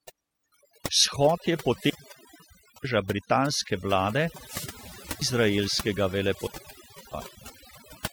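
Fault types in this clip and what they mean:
Overdone noise removal, throughout: the noise reduction is set so hard that frequency bands close to its noise estimate are pulled down or shut off, taking the quieter parts of the speech with them. The background is near silence with twinkling specks.
Wireless microphone squelch dropout, at 1.75–2.92 s, 4.35–5.41 s and 6.33–7.21 s: the FM radio link fades and hiss rises until the receiver's squelch mutes the output for about 0.95 s, 0.56 s and 0.67 s, then the speech comes back.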